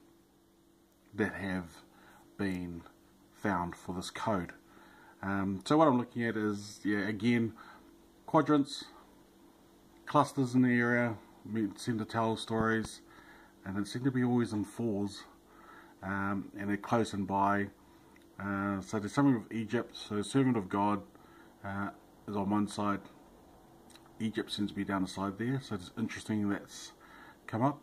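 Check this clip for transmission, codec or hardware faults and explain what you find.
One fault stands out. Between 12.60 and 12.87 s, a loud pop lands as two sharp thumps, roughly 10 dB above the surrounding sound, which continues underneath. The likely cause is a sudden voltage step from a switch, plug or static discharge.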